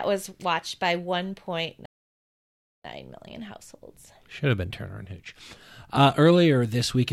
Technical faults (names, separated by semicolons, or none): playback stall